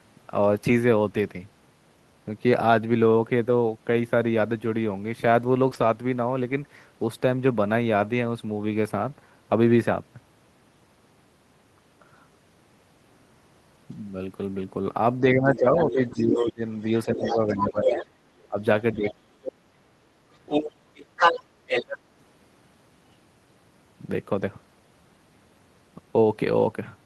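At 3.93 s, a lost packet rebuilt from error correction makes about 40 ms of the speech rough and grainy, which fits two packets. The decoder played the low-bitrate copies carried in the following packets instead of leaving a gap. On a spectrogram, those frames look smeared.

At 5.69 s, a short concealed packet loss lasting 20 ms never reached the decoder. The receiver continued the preceding sound to fill it, which produces a brief smear or wobble. The waveform stays unbroken, but the harmonics at that point look stretched and blurred rather than fresh.

Straight after, from 5.73 to 5.83 s, another stretch is rebuilt from error correction, about 60 ms long, which points to three packets. It has the same coarse, noisier texture. At 7.41 s, a further 40 ms is rebuilt the same way.

From 15.2 to 19.88 s, the speech is suppressed during double talk. The talker's level sinks, at its deepest by about 25 dB, in pieces adding up to roughly three seconds. 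The likely cause is an echo canceller that turned everything down while both sides spoke. On the waveform, this shows as sudden envelope dips.

The other side's voice is leaking through from 15.55 to 16.52 s, quietly, well under the talker. It is stronger from 17.21 to 18.48 s, only slightly below the talker. There is a brief scrap at 19.05 s, and it returns at 20.46 to 21.98 s as loud as the talker. This leakage is likely loudspeaker echo the canceller left in the microphone signal. It shows as a second, overlapping harmonic pattern.

At 24.41 s, a single 20 ms frame rebuilt from error correction gives one short, rough patch.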